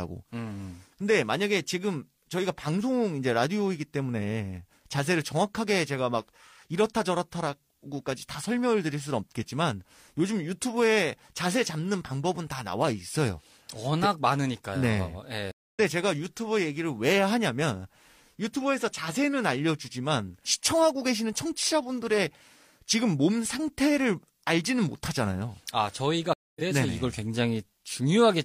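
At 15.51 s and again at 26.33 s the speech hits a stream reconnect: the connection drops, there's about a quarter-second of silence, then a fresh decoder picks up mid-stream roughly a fifth of a second further on, so a little is skipped each time.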